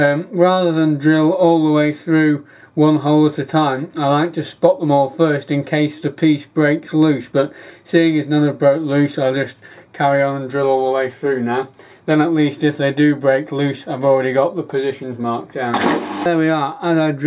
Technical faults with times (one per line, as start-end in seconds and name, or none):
none